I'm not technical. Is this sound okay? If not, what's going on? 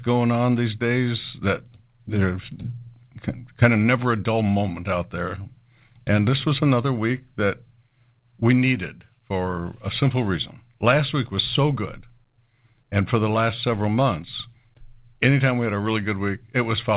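Yes, nothing is wrong with this speech recording. It went through an ordinary call connection, so it sounds like a normal phone line: nothing above 4 kHz comes through, which fits the G.711 A-law phone codec.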